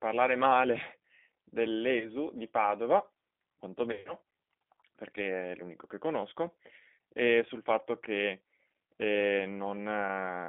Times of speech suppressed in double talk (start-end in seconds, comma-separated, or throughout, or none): none